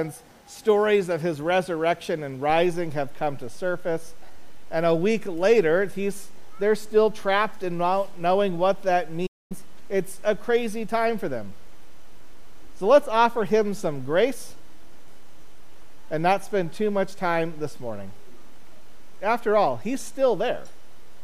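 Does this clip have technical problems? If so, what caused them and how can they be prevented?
Yes. A playback stall occurs from 9.26 to 9.52 s: the sound stops mid-flow into a gap of about 0.24 s, then carries on. The likely cause is the player running out of buffered data or its audio thread being blocked, so nothing reached the output until it recovered. On a waveform this shows as a flat line, and on a spectrogram as an empty vertical band cut cleanly through all frequencies. Larger playback buffers and a high-priority audio thread that never waits on other work would prevent it.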